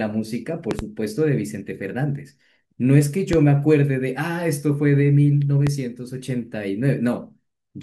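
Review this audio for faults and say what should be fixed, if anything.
Loud pops at 0.71–0.83 s (a double), 3.33–3.37 s and 5.67–5.70 s, jumping well above the speech, likely from voltage spikes from a connector or static. Secure the cables and ground the gear.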